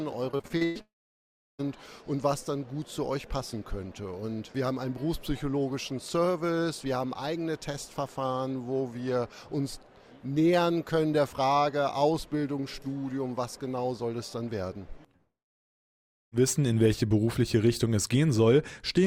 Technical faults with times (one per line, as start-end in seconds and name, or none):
0.31-0.77 repeated packet loss (robotic sound)
0.81-1.61 long network dropout
15.17-16.34 long network dropout